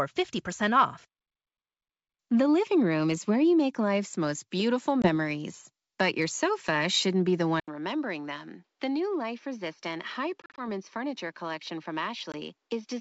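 Right after "life's most beautiful", at 5.02 to 5.10 s, there's a packet loss on the ADPCM call. About one packet, 20 ms, drops out as a hard-edged gap. Since ADPCM only codes differences, the receiver's predictor and step size lose track of the sender's, so the speech comes back slightly distorted, with a bit of grit before settling. The same thing happens at 10.42 to 10.62 s, where 100 ms goes missing in chunks spread over 160 ms (longest run 40 ms, roughly five packets), and again at 12.32 to 12.35 s with a single 20 ms drop.

After "sofa shouldn't be the", at 7.60 s, the input switches to a poorer device, most likely a different microphone or a headset dropping to its call profile. There's an 80 ms silence at the switch. From then to the end nothing gets through above 6.1 kHz, the level drops by about 5 dB, and a new noise floor sits roughly 50 dB below the speech, so it all turns duller and boxier than the earlier G.722 wideband sound.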